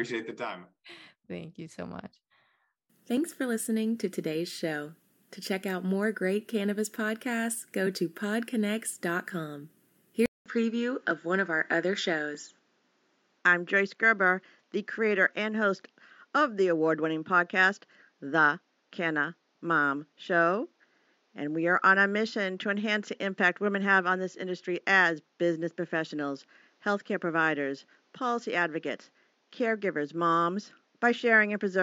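At 10.26 s the speech drops out for about 200 ms, and from then to the end it sounds duller, with nothing above 7.3 kHz and a faint new background noise sitting roughly 45 dB under the voice. The loudness barely shifts. That pattern points to an input switched to a poorer device, most likely the system jumping to a different microphone or a headset's narrower call profile partway through the recording.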